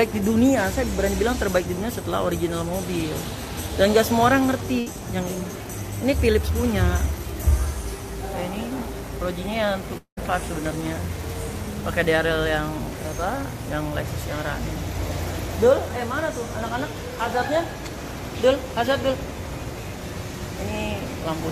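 A burst of packet loss at 4.79 to 4.94 s cuts the audio briefly. About 67 ms of concealment carries the last sound forward as a decaying buzz or hiss, and the sound then resumes with roughly 60 ms of content skipped. On a spectrogram it shows as a short smeared band fading out, followed by an abrupt jump. In the waveform the envelope tapers, then a discontinuity appears. At 9.97 to 10.19 s a longer break follows, likely a long network dropout. The receiver again extends the last sound, but the fill thins into about 110 ms of near silence, and around 200 ms of material never returns. The spectrogram shows a stretched, fading smear ending in an empty gap before energy reappears, and the waveform flattens almost to zero there.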